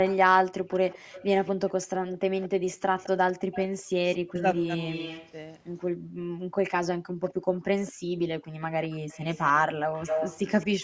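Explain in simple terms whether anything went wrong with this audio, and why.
Several things went wrong, all tied to the echo canceller on a speakerphone call.

There is an echo leak from 0.06 to 5.32 s and from 7.23 s to the end. A faint copy of the speech returns 212 ms late. It is louder in the second stretch. The likely cause is loudspeaker sound that the canceller failed to remove.

The background is gated by the echo canceller at 0.99 to 1.12 s, 5.92 to 6.57 s and 7.92 to 8.09 s. The room sound briefly drops out, then returns.

Speech is suppressed in double talk from 4.27 to 4.45 s. The voice sharply dips for about a fifth of a second, likely because both sides spoke at once.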